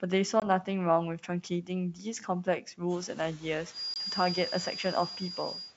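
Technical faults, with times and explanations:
0.40–0.47 s and 3.94–3.97 s, packet loss on an ADPCM call: each time about 20 ms drops out to a hard-edged silence, roughly one packet's worth. The decoder's predictor and step size lose sync with the sender, so the sound comes back slightly distorted before settling.
1.94–2.05 s, speech cut by the noise suppressor: for about 100 ms the suppressor mistakes part of the speech for background and pulls it down by up to about 9 dB, so that stretch sounds swallowed and faint.
3.67 s to the end, feedback whistle: a thin, steady tone at 4.8 kHz sits roughly 10 dB under the speech and swells and fades slowly in level. The likely cause is a loudspeaker-to-microphone loop hovering right at the edge of feedback without tipping into a full howl. It comes in shortly after the room noise rises by about 13 dB, and it's still audible over the wideband, G.722-style band up to 7 kHz.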